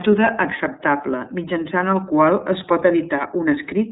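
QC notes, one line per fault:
throughout, iLBC codec: the speech sounds plainly rough and slightly synthetic, thin and muffled, with no content above about 3.8 kHz. This is the narrowband iLBC codec at work. Each 30 ms frame's excitation is coded on its own, without drawing on the previous frame. The harsh quality and narrow band fit iLBC's 13.33 kbps mode.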